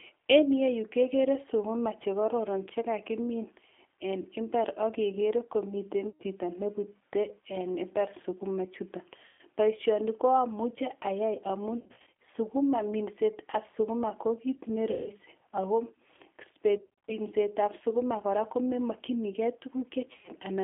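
From start to finish the speech carries G.729 codec damage. At 8 kbit/s the coder rebuilds each short frame from a vocal tract filter, a pitch predictor and a few pulses, so the voice is intelligible but rough and faintly synthetic. On a spectrogram the energy sits in a telephone band of roughly 250 Hz to 3.4 kHz, with nothing above and a smeared, grainy texture in the harmonics.

Packet loss concealed by the speech codec first appears at 6.10 to 6.23 s, where about 100 ms of audio is missing. Similar gaps follow at 9.25 to 9.41 s (about 140 ms) and 14.91 to 15.09 s (about 150 ms). Across 11.80 to 12.12 s and 16.78 to 17.15 s, about 210 ms is lost in each, in short runs up to 50 ms. At 20.13 to 20.32 s about 110 ms goes, with one 70 ms run. In each gap the decoder stretches the last sound into a buzzy tone or coloured noise that fades. The spectrogram shows frozen, repeated harmonic bands, and the waveform shows a tapering envelope that stays weak briefly after the packets return.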